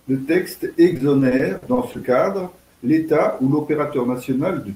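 From 0.93 s to 1.96 s the speech shows repeated packet loss, giving a robotic sound. Audio data went missing or arrived late again and again across this second, and each hole was bridged by stretching the preceding sound. About 190 ms of the span is concealment and another 100 ms is lost outright, with no single gap over 50 ms. The result is choppy speech with small pieces missing.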